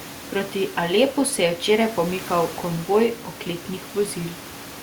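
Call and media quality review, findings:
No faults found in this speech recording.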